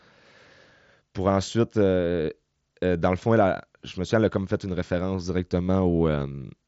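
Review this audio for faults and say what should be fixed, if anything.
No faults found here; nothing needs fixing.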